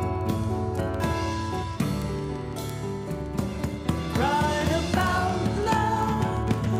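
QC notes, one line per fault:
0.15–6.76 s, word clock ticks: unlocked clocks drifting by a few hundred ppm slip one sample about every 50 ms, showing as evenly spaced thin vertical broadband lines and single-sample waveform steps.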